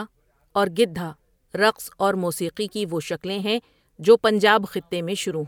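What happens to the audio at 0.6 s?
At 0.6 s the speech carries on intact, with no dropout, click, distortion or other fault at that moment.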